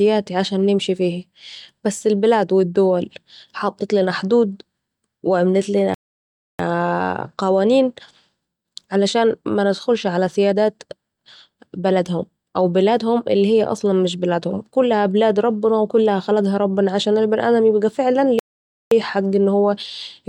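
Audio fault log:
5.94–6.59 s and 18.39–18.91 s, playback stall: the speech cuts to silence mid-flow for about 0.65 s, then 0.52 s, before resuming, likely because the player ran short of buffered data or its output thread was briefly blocked.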